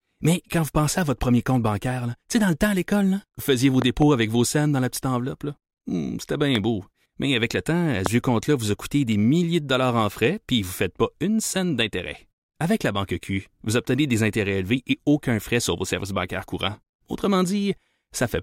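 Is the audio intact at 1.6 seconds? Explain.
Yes, at 1.6 seconds the audio is intact, with no fault present at that moment.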